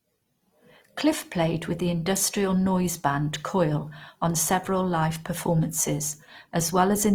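From start to finish the speech has a rough, grainy texture. Voiced tones turn noisy and lose their smoothness, but the top end stays open up to about 20.3 kHz with no obvious gaps or swirling. That points to Opus compression, likely in its music (CELT) mode at a rate around 24 kbps. There the encoder keeps each band's energy but fills starved bands with noise or folded lower content, trading clarity for grit.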